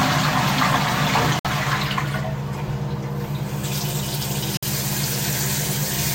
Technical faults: Bluetooth dropout

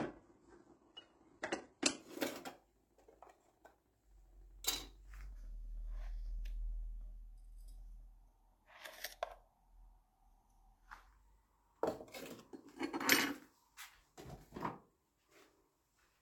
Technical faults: adaptive stream starting at a low bitrate; section at the wrong speed

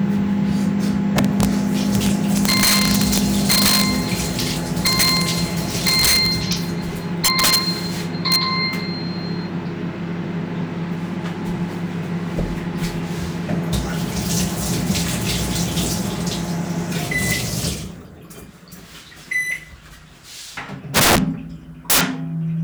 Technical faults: integer overflow; loose connector crackle

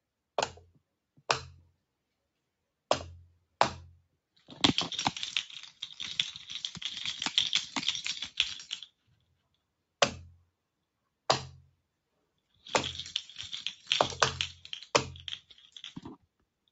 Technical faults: sound cut by the noise suppressor

